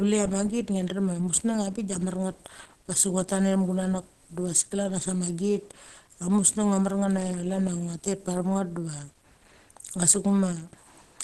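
Throughout this speech clip, likely low-bitrate Opus compression in its hybrid speech mode, consistent with about 16 kbps, cuts everything above 12.3 kHz, leaving the sound muffled and hoarse.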